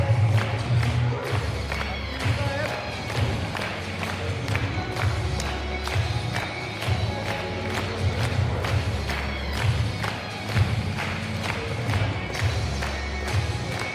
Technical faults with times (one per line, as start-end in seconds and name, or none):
none